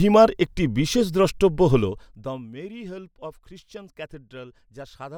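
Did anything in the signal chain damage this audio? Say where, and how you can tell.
Yes. Zipper noise runs from 1.75 to 2.50 s, just after "একটি বিশেষ দ্রষ্টব্য" and ending before "মেরি হেল্প অফ". The level falls about 20 dB in unsmoothed per-buffer gain steps at roughly 100 per second, each step clicking, which points to the buffer stage.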